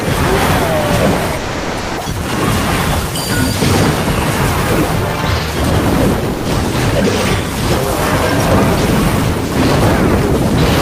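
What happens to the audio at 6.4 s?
From 6.33 to 6.45 s, about 120 ms of sound gives way to steady noise or near silence, then returns. This is sound dropped by the voice detector, likely a transmitter's voice detection, such as Opus DTX, judging the passage as background and substituting comfort noise. Unlike packet-loss concealment, nothing is stretched or repeated.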